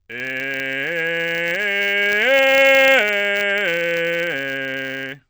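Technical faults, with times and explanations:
Throughout, filter restarted on every block: each block starts from silence, so its opening transient produces a 100 Hz buzz that rises and falls with the music's level.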